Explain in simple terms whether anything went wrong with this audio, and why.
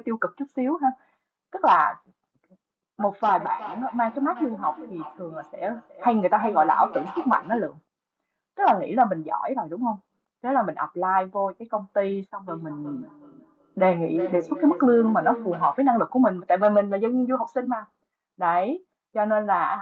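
Two devices in one room were on the same call, so one device's speaker leaked into the other's microphone: a feedback echo between two devices. From 3.38 to 7.76 s and 12.48 to 15.91 s, the speech comes back roughly every 0.4 seconds, quieter and thinner.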